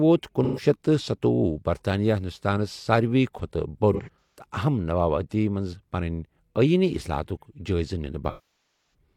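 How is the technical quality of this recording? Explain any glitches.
The recording has three dropouts from AAC frame loss with concealment. At 0.43 to 0.63 s, about 130 ms of audio is patched over and sounds smeared and noisy. From 3.93 to 4.44 s, losses are scattered across roughly 430 ms, with the longest gap around 150 ms, giving a phasey, broken stretch. At 8.29 to 8.94 s, over half a second is lost. The sound decays toward silence, then fades back. The decoder rebuilt missing frames from the last good spectrum and faded out as gaps lengthened.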